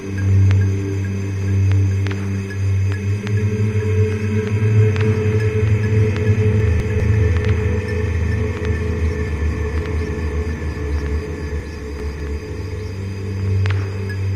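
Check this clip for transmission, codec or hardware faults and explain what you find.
Two chunks out of order disturb these sounds. Between 6.6 and 7.0 s a 200 ms chunk plays one slot late. Between 11.6 and 12.2 s another plays two slots late. Each swap leaves three hard joins that jumble the sound. Unlike a dropout, no audio is missing.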